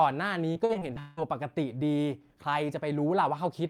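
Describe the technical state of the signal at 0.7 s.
At 0.7 s you're inside a burst of repeated packet loss from 0.53 to 1.19 s: six gaps patched by repeating prior sound, giving that choppy, robotic speech.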